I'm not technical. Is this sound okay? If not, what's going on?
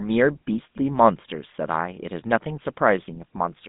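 No. The speech went through the GSM full-rate codec, an early mobile-phone system that rebuilds the voice from a rough model driven by regular pulses. Throughout, it sounds plainly buzzy and gravelly, and everything above about 3.8 kHz is gone, leaving a thin, phone-like tone.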